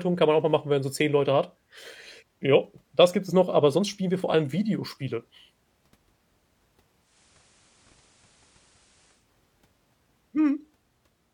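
From 6.99 to 9.29 s, digital radio blending to analogue: the receiver cross-fades over about 200 ms to FM, bringing hiss and a drop of about 2 dB.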